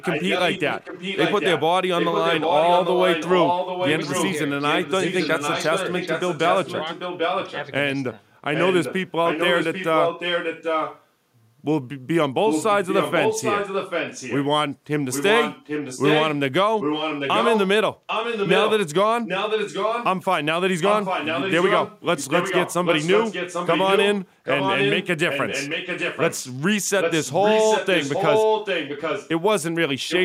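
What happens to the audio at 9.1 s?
At 9.1 s you're in the middle of an echo leak running from about 8.54 to 11.05 s. A delayed copy of the speech comes back roughly 0.79 s late, only a little quieter than the original, likely because a far-end loudspeaker's echo canceller let it slip through.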